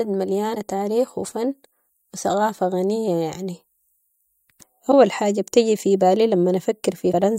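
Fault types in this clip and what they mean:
Damaged data in a compressed stream: three brief glitches of about 50 ms each, at 0.52 s, 4.89 s (just before "حاجة بتيجي في بالي") and 7.09 s, where corrupted frames knocked the decoder out of sync until it found a valid frame header.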